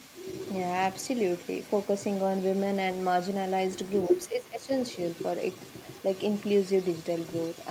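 From 0.0 to 3.55 s a faint delayed copy of the speech trails about 0.35 s behind, about 30 dB down. This is an echo leak, likely from a loudspeaker echo canceller letting residue through. It returns from 3.84 to 4.25 s, slightly stronger at about 25 dB down.

From 4.09 to 4.71 s the speech dips by up to about 20 dB, for about half a second in all. This is speech suppressed in double talk, likely the canceller turning down the talker while echo was present.

From 4.79 s to the end, the echo leak is back, now about 0.31 s behind and about 30 dB down, likely the same canceller residue.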